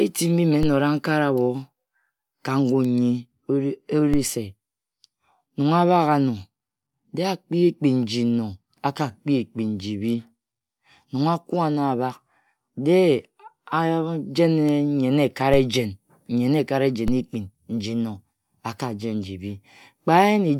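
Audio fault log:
0.63 s, 4.14 s, 15.54 s and 17.08 s, DC step: at each of these moments the waveform's zero line suddenly jumps by about -14 dBFS, and you get a short low thump while the speech carries on untouched. The jump isn't held. A 5 Hz high-pass bleeds it away over a few tens of milliseconds, so each one lands as a single knock rather than a lasting shift, with the same size and character all four times.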